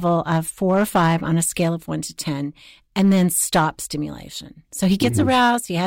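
Hard clipping runs through the whole speech clip. The signal was driven about 6 dB beyond what one stage could pass, so its peaks were sliced flat. Only around one to two percent of samples went over, which places the damage on the loudest moments, where it adds a distorted edge. On a waveform, those peaks show squared-off plateaus instead of rounded tops. A spectrogram shows added harmonic energy reaching far up the spectrum at the same instants.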